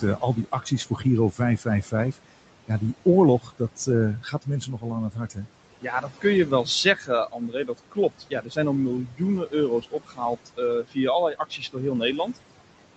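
Noise suppressor artifacts run through the whole recording. The suppressor pulls down the bands it judges to be steady noise by about 18 dB, so the room noise, which sits about 15 dB below the speech, drops away in pauses and swells back under speech. On a spectrogram the noise floor looks patchy and blotchy, dark between phrases and brightening as speech starts, all beneath the 8 kHz ceiling of the call codec.

Speech cut by the noise suppressor happens six times: 0.00 to 2.32 s, 3.40 to 3.88 s, 4.20 to 5.47 s, 5.82 to 8.58 s, 9.07 to 10.97 s and 11.34 to 11.77 s. In these stretches the suppressor mistakes quiet speech for noise and turns it down by about 13 to 19 dB. Soft consonants and word endings sound swallowed, adding up to roughly a second in the longest stretch and a fraction of a second in the shortest. On a waveform the tails of syllables collapse abruptly, and on a spectrogram the faint high-frequency consonant energy shows gaps.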